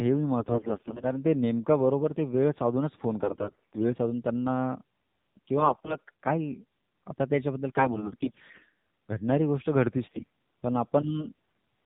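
Throughout, the speech carries AMR narrowband mobile codec coloring: nothing above 4 kHz, with a buzzy, synthetic edge that points to a low rate near 7.4 kbps. Unlike a plain low-pass filter, the timbre itself sounds modelled and reedy, not just dull.

AMR bit errors strike at 0.40 to 1.05 s, 3.20 to 3.86 s, 5.58 to 6.11 s, 7.70 to 8.70 s and 10.08 to 10.27 s. Corrupted low-priority bits misplace the excitation pulses, so pitch and loudness hold while the voice turns hoarse and gargly, heaviest in the briefest burst. Dropouts or concealment would instead mute or smear the sound.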